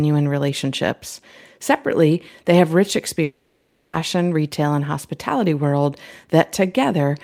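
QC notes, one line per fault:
3.23–3.95 s, long network dropout: after "they have rich" the last sound is drawn out into a fading buzz for about 0.7 s, likely from packets that never arrived. The audio resumes at "retail and hospitality world" with that content gone. On a spectrogram, smeared repeating bands dim; the waveform decays without reaching flat silence.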